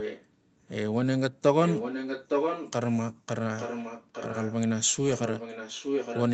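A delayed copy of the speech, trailing by about 0.86 s, returns at 0 to 0.26 s, 1.64 to 2.72 s, 3.57 to 4.56 s and 5.09 to 6.22 s. It is softer in the first and third stretches and nearly as loud as the speech in the second. This is echo leak, likely from a far-end echo canceller leaving loudspeaker pickup behind.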